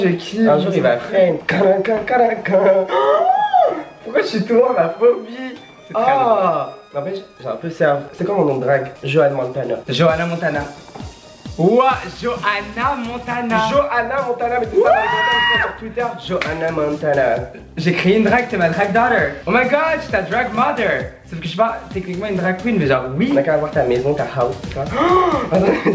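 No technical faults can be heard anywhere in this audio. It has passed through a WebRTC call path whose wideband codec leaves nothing above 8 kHz, which fits G.722.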